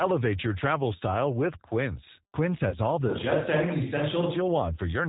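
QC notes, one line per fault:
Throughout, G.729 codec. The speech is rebuilt at 8 kbit/s from a vocal tract filter, a pitch predictor and a few pulses per 10 ms frame. That leaves it plainly rough and slightly synthetic. Nothing reaches above 4 kHz, so sibilants lose their edge and the top end sounds closed off.
2.70 to 2.77 s, VoIP packet loss concealed by the speech codec. About 20 ms of audio went missing, which fits two lost 10 ms frames. The decoder filled the gap by repeating its last pitch and filter with falling gain. The sound smears and fades. Each frame builds on the one before, so the speech stays weak and distorted for a while after the data comes back. The damage is heard for about 80 ms.
3.10 to 4.35 s, switch to a distant microphone. The sound turns suddenly roomy and hollow, with thinner bass. It snaps back just as abruptly at 4.35 s. The level barely changes. A faint room noise is present, roughly 35 dB below the speech. 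The likely cause is that the close microphone dropped out and a pickup further from the source carried the signal for that stretch, hearing more of the room's reflections.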